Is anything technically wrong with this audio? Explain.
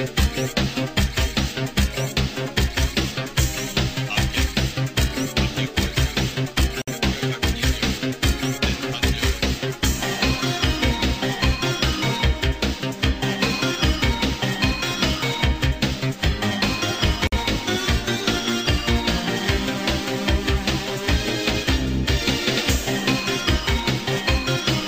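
Yes. There is a gap at a join of encoded pieces, twice: at 6.82 s the sound stops for about 58 ms, and at 17.27 s for about 52 ms. Each piece was encoded on its own, and the encoder's start-up silence and last-frame padding were left in when they were joined. Unlike a dropout, nothing is lost. The sound resumes exactly where it broke off, and the edges of each silence are softened by the codec rather than cut clean.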